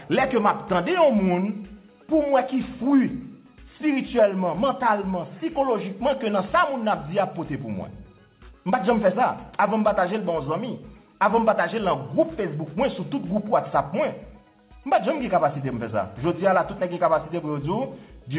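No technical faults can be heard. The audio carries the narrowband character of a telephone-style call path, with nothing above 4 kHz, which fits G.711 A-law coding at 64 kbps.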